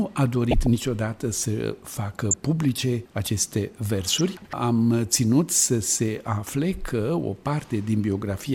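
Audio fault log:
0.51–0.67 s and 2.31–2.40 s, DAB burbling: two short bursts of noisy blips sit over the sound. In each burst, bit errors slip past the receiver's error correction into the MP2 data, so corrupted samples put short blips of noise into individual sub-bands. The first burst spans what fits about seven frames and the second about five. The error rate is a small fraction of a percent.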